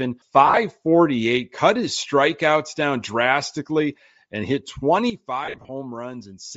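Across the whole recording the speech carries a breathy, grainy edge, with the upper spectrum thinned and filled with noise. This is plainly audible codec damage, likely from Bluetooth LC3 compression, and it fits a low rate near 32 kbps with 10 ms frames.

From 0.47 to 0.57 s, lost LE Audio frames leave about 70 ms of gaps scattered across that 0.1 s, the longest run around 40 ms. The decoder repeats the last spectrum with scrambled phase, so the sound becomes a short noisy smear rather than dropping to clean silence.

At 5.10 s, right after "down drastically and hit", speech and background noise drop together by about 12 dB in one step and stay down to the end at 6.56 s. This is a sudden gain jump, likely a digital gain change applied without a ramp. Unlike a fade, the level changes instantly, and it does not recover the way a frame-loss fade does.

From 5.45 to 5.69 s, a second run of lost LE Audio frames removes about 160 ms spread over 0.24 s, with the longest run around 50 ms. 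It is heard again as a grainy smear, now at the already-lowered level.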